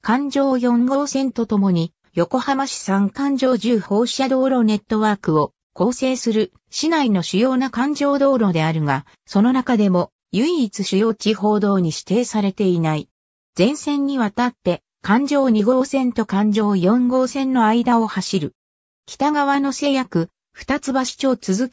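No technical faults can be heard anywhere in this recording.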